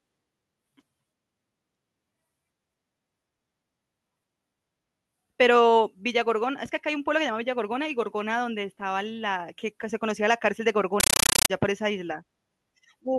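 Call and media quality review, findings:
Compressed stream played as audio, 11.00–11.50 s: AC-3 bitstream passed to output as PCM, undecoded. Loud chattering static replaces the speech, with 9.3 ms noise bursts repeating at 31.25 Hz. Frame pattern fits Dolby Digital around 448 kbps.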